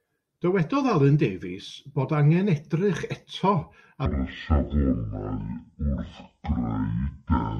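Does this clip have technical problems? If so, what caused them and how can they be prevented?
Yes. From 4.06 s to the end, the speech is a section at the wrong speed. It runs at 0.55 times normal rate, slowed and roughly ten semitones deeper, likely from playback against a mismatched sample-rate clock. Keep sample rates consistent across every editing and playback stage.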